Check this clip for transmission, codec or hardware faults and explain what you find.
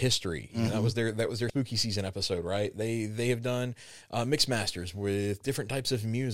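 There's one fault, a short stretch of damaged data in the compressed stream, from about 1.47 to 1.50 s in the speech. For roughly 30 ms the encoded bytes arriving at the decoder were wrong, so it couldn't make sense of the frames there, lost its place in the stream and had to hunt for the next valid frame header before it could carry on. You hear that as a brief glitch cutting across the speech.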